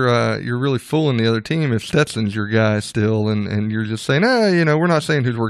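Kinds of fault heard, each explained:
No kind of fault is heard in this clip.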